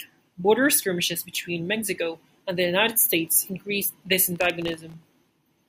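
From 4.36 s to 5.23 s, just after "increased this", the speech breaks into a burst of processor overload crackle: a gritty, tearing texture riding on the sound for under a second. The processor kept missing the deadlines for very short buffers, likely under a millisecond each, and each miss was filled with silence. On the waveform this shows as dozens of tiny hard-edged dropouts. On the spectrogram it shows as dense vertical broadband streaks across the speech.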